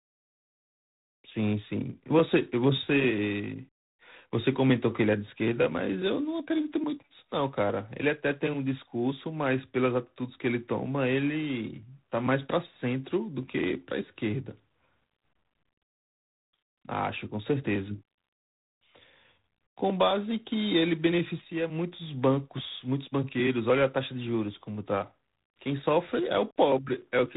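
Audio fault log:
Throughout, G.726 ADPCM: the speech carries a rasping hiss that rides its level, which fits the 24 kbit/s mode, and nothing gets through above 3.8 kHz.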